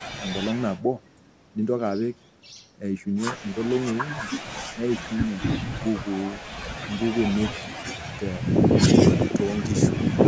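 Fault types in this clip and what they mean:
No faults are present; the speech has passed through a call's microphone processing, which trims the lowest bass and leaves nothing above 8 kHz, as is normal for that path.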